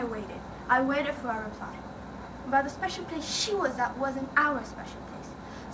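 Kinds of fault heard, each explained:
No faults are audible anywhere in this recording.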